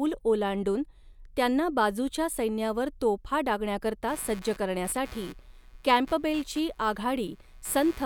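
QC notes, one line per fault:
4.08–8.06 s: computer activity noise, a buzzing chirp pulsing around 150 times a second, about 25 dB below the speech, as processor load disturbs the shared audio ground.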